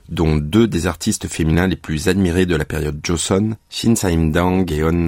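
At 1.54 s, between "dont deux des artistes" and "les plus admirés de", and again at 3.74 s, there's a repeated buffer: fresh audio arrived late, so a tiny slice played twice, roughly 10 ms long. The hard join makes each one a quick click or brief buzz.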